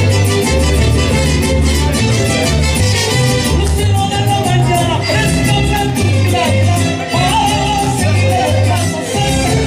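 From 2.04 s to 9.61 s, a train of clicks ticks steadily over the sound, about 5.4 per second, roughly forty in all, at about signal level. Likely cause: interference or a faulty connection or power supply.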